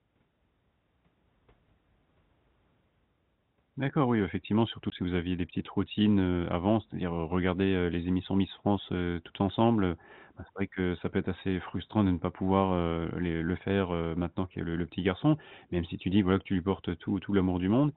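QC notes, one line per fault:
4.90–4.92 s, packet loss filled with silence: one 20 ms packet replaced by silence, a flat waveform gap with hard edges.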